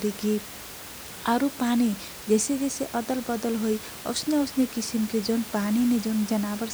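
Nothing stood out as a fault on listening to this speech; the only thing beneath it is the room's own background noise, sitting about 15 dB below the speech.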